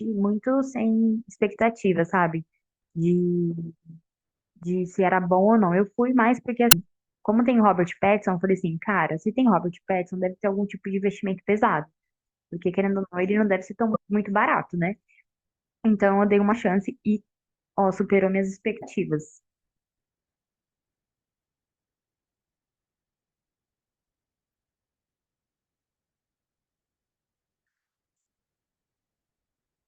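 Damaged data in a compressed stream breaks the speech four times: at 6.69 to 6.74 s, 13.92 to 13.96 s, 16.49 to 16.53 s, and 18.79 to 18.83 s. Each lasts only 40 to 54 ms. At these points the compressed bytes were wrong. The decoder misread those frames and lost sync. It then hunted for the next valid frame header. Each event is heard as a brief chirp or blip cutting into the speech.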